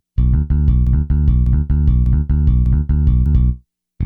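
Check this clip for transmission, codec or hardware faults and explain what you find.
One transmission fault is present. Broken-record loop, 0.87 to 3.26 s: a stall likely resent the last 0.6 s fragment, which repeats exactly four times, replacing the intended audio.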